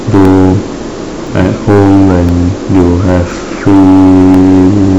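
From 0.25 s to 4.34 s, the speech shows periodic USB or driver dropouts. About every 1.02 s, a short gap opens, roughly a millisecond of silence where samples went missing. A blocked bus or driver is the cause. Each gap clicks sharply against the speech.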